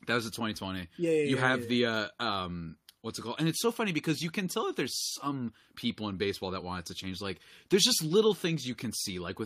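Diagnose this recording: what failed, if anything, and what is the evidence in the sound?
Nothing in the signal chain appears to have failed, since the speech recording carries no audible defect from any stage, whether wiring, conversion, buffering, processing, transmission, storage or playback.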